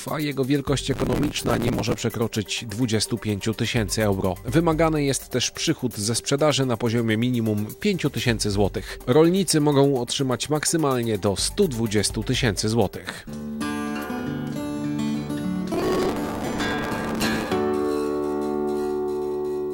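A gritty, tearing crackle rides on the sound from 0.94 to 2.01 s and again from 15.74 to 17.48 s. This is processor overload crackle: many buffers of around 5 ms each missed their deadline, and each gap was filled with a hard-edged scrap of old audio.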